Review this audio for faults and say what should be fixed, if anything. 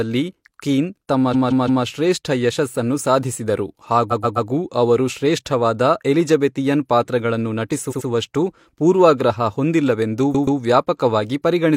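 Stuttering replays at 1.30–1.81, 4.08–4.46, 7.87–8.04 and 10.30–10.56 s. Each repeats a short block of about 171, 128, 85 and 128 ms. These are repeated frames: the same compressed frames were written or sent again, adding about 1.3 s to the speech. Prevent it by checking frame sequence numbers or timestamps and discarding duplicates before decoding.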